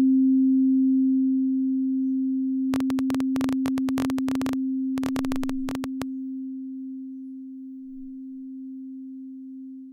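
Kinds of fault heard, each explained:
Train of clicks: about fifty same-shaped pops, roughly 14 per second and unevenly spaced, from 2.74 to 6.03 s, likely interference. Their uniform shape sets them apart from random crackle.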